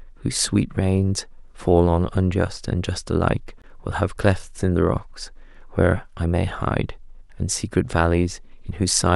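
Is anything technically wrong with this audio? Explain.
Yes. At 3.62 s there is a block of digital silence: a buffer of about 20 ms most likely went unfilled and was output as zeros, so the speech drops out abruptly.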